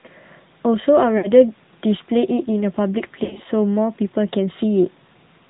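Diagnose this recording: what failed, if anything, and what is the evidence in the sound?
The codec stage is at fault throughout: the speech has gone through the AMR narrowband mobile codec. Nothing above 4 kHz survives, which places the audio at 8 kHz sampling, and the voice has a plainly audible buzzy, synthetic quality from the codec rebuilding it as a vocal-tract filter excited by sparse pulses. The degree of coarseness fits a mid-range mode of roughly 10 kbps rather than the lowest rates.

The network stage shows lost AMR speech frames at two points. From 1.18 to 1.32 s the voice smears into a held, fading sustain, which fits about three consecutive 20 ms frames failing and the decoder repeating its last pitch and filter settings at falling gain. From 3.24 to 3.42 s the sound breaks up over about 160 ms into repeated dips and warbles. This fits roughly six frames lost in scattered runs, none longer than about 60 ms, with the voice returning rough after each gap.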